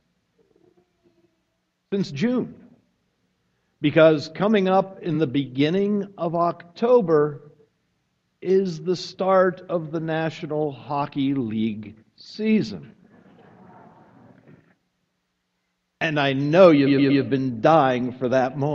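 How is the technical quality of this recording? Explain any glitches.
The recording has repeated frames, heard as two stutters. At 5.14 to 5.16 s, a 23 ms chunk, which fits one compressed frame, plays twice. At 16.86 to 17.21 s, a 116 ms block plays three extra times. This adds 0.35 s and produces a stuttering loop.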